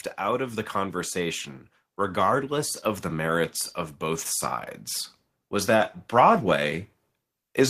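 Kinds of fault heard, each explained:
Automatic gain rising: from 0.19 to 4.3 s the level climbs steadily by about 6 dB as the gain control decides the input is too quiet. Unlike a talker moving closer, the room noise swells together with the speech, at the same slow rate.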